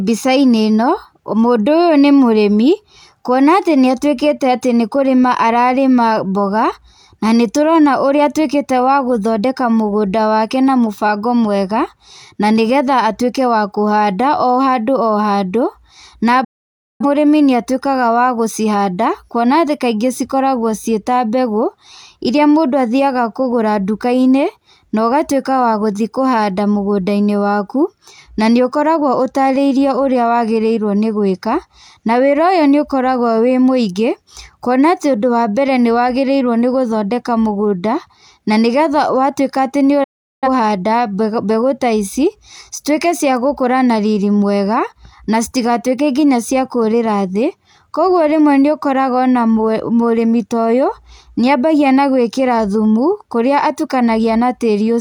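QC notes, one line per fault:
16.44–17.06 s, digital broadcast dropout: the audio fades out over about 8 ms and stays silent for roughly 0.55 s. The receiver muted while frames failed, so whatever was sent in that gap is gone.
40.04–40.48 s, digital broadcast dropout: the same quick fade into a shorter hole of about 0.38 s. It sounds like the receiver muted again until clean frames came back, then the programme picked up mid-flow.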